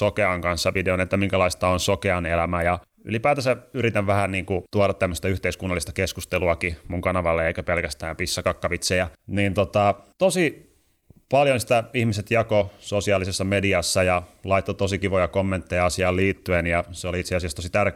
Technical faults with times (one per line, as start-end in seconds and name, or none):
none